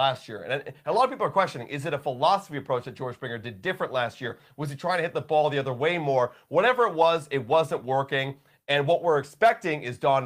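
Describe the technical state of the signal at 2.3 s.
At 2.3 s the signal is intact, with no audible dropout, distortion, or other technical fault at that point.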